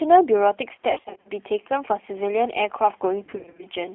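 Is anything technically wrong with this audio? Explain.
Yes. The whole clip sounds narrow, slightly rough and synthetic, with nothing below about 250 Hz or above about 3.4 kHz. That is the G.729 codec. Rather than sending the waveform, it rebuilds each short frame from a vocal-tract filter, a pitch predictor and a few pulses, which fits an 8 kbit/s VoIP stream. The sparse pulse model causes the graininess, and the telephone band causes the thin, muffled tone.

From 0.91 to 1.30 s, and again from 3.24 to 3.65 s, the speech breaks into stretched, buzzy fragments that fade and stay weak or smeared. This is VoIP packet loss concealed by the speech codec. In the first stretch, about 210 ms of audio went missing across 340 ms, with gaps up to 50 ms. In the second, about 250 ms went missing across 380 ms, with gaps up to 70 ms. The decoder filled each gap by extending its last pitch and filter at falling gain. 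Because each frame builds on the one before, the distortion carries on briefly after packets return.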